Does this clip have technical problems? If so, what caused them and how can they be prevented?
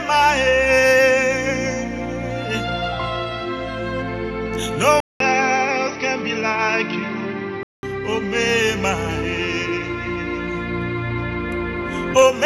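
Yes. From 5.00 to 7.83 s the sound turns duller, with a 200 ms silence at the switch and nothing above 6 kHz, a flat-topped spectrogram band. A new noise floor appears, about 50 dB down. The likely cause is the input switched to a poorer device. Locking the recording input prevents this.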